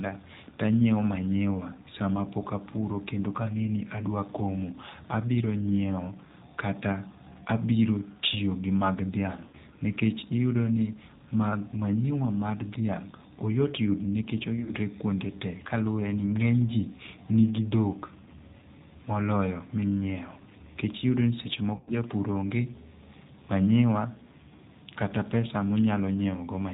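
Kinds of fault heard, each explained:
G.729 codec: throughout this speech the 8 kbit/s G.729 coding rebuilds the sound from a vocal tract model and sparse pulses, so nothing above 4 kHz survives and the voice sounds rough and synthetic. The damage is steady across the whole clip, unlike the brief dropouts.
VoIP packet loss concealed by the speech codec: at 9.48, 14.57 and 21.74 s the decoder fills missing packets by stretching its last pitch and filter into a fading buzzy tone or coloured noise, lasting roughly 50 to 120 ms of lost audio. Unlike plain clicks or silence gaps, the voice stays weakened briefly afterwards.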